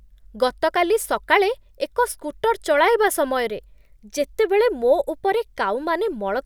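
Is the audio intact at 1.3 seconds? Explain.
Yes, the speech is intact at 1.3 seconds, with no audible fault at that moment.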